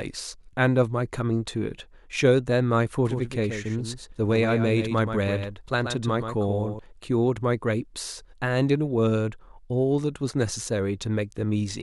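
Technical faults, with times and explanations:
3.05–6.79 s, doubled audio track: a copy about 10 dB quieter trails roughly 150 ms behind, starting and stopping abruptly, likely from a slower second capture path.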